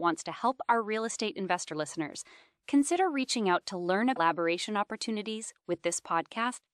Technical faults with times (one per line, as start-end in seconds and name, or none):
4.16-4.20 compressed frames skipped